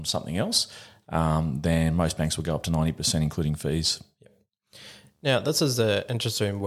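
From 4.89 s to the end, video or display buzz creeps in: a screen picking up into the audio, giving a faint 75 Hz buzz with hash, well below the speech.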